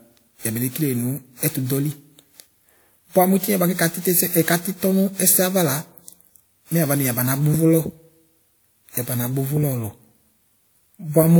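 From start to finish, the speech was likely run through a lossy encoder over and over, on the order of ten passes, each re-quantising on a shifted frame grid. That is generation loss, and its character points to WMA at around 128 kbit/s. The errors stack up, leaving a swirly, hollow coloration and smeared consonant onsets, worse than one pass at that rate would give, while the spectrum stops at about 20.1 kHz.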